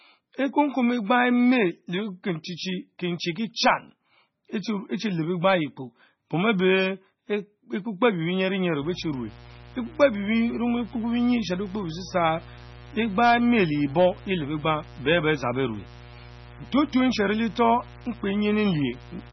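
Throughout the speech, the sound is watery and swirly, with nothing above 5.9 kHz. This is heavy damage, likely from MP3 compression at a very low bitrate, around 16 kbps. Its bit-starved encoder drops weak frequency lines frame by frame, so they flicker on and off, and it cuts the treble at a fixed point. What sets this apart from plain low-pass filtering is that flickering, swirling texture layered over the dull top end.

From 8.78 s to the end, mains buzz joins in at roughly 20 dB below the speech. Sharp switching spikes, twice in every 60 Hz cycle, stack up harmonics of 60 Hz well up the spectrum. The result is a steady, raspy buzz rather than the smooth, low tone of simple hum.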